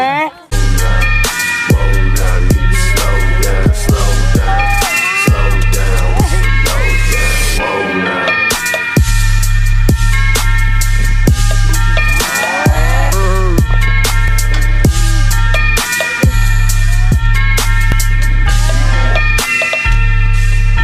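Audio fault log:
2.24 s and 14.28 s, dropped buffer (overrun): an abrupt jump forward, where roughly a tenth of a second of sound is missing and the two sides butt together, likely because samples were overwritten before being read.
17.12 s and 17.92 s, dropped buffer (overrun): the same kind of skip, with a shorter loss of about 40 ms. Unlike an underrun, no silent gap is inserted; the sound simply leaps ahead.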